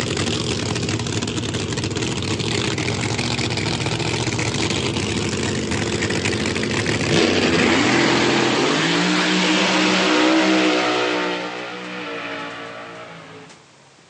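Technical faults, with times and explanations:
No technical faults are audible anywhere in the clip.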